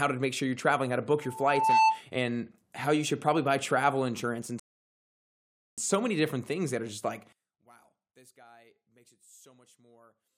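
From 1.22 to 2.02 s, after "you're traveling how to", a loudspeaker feedback squeal at 883 Hz swells over about half a second to roughly 10 dB above the speech before "and how you should".

From 4.60 to 5.78 s, after "buy travel insurance and", a rebuffering stall cuts to silence, adding 1.18 s, then resumes exactly at "so many different things".

From 7.33 s to the end, after "that are just like", the speech drops by about 28 dB to a faint residue, likely one channel inverted cancelling when summed to mono.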